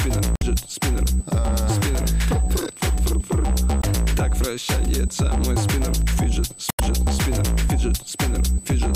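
A steady USB whine sits under the whole clip. It is a fixed tone at 8 kHz, roughly 20 dB below the sound. Current drawn in the bus's 125-microsecond microframes leaks in through power or ground, and that repetition rate sets the pitch.

Damaged data in the compressed stream breaks through three times: 0.36 to 0.43 s, 3.80 to 3.85 s, and 6.68 to 6.80 s. Each is a short chirp or squawk. The decoder misreads corrupted frames, loses sync, and hunts for the next frame header.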